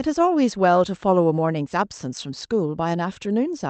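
Nothing's wrong with this one: the speech comes through with just the ordinary character of a call connection, its top end stopping around 8 kHz, which fits an Opus call link at roughly 32 kbps.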